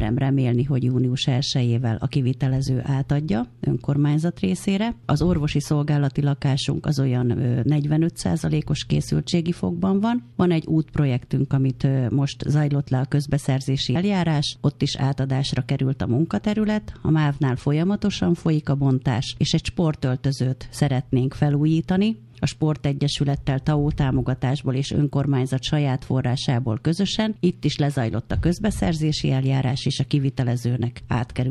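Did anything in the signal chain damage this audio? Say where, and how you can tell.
Yes, compressed frames skipped at the codec or storage stage. At 9.32 s the audio jumps ahead about 20 ms, which points to one lost frame; at 13.94 s it jumps about a tenth of a second, several frames.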